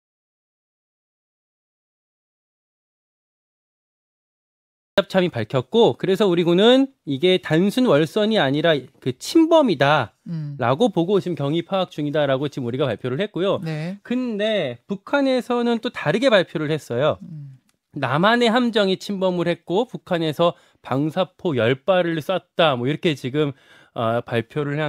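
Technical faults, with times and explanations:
0.00–4.98 s, audio dropout to silence: the speech opens in complete silence already under way, then cuts in abruptly at 4.98 s. Unlike a quiet pause, no room tone or hiss remains, so the input was likely lost while the recorder kept writing silence.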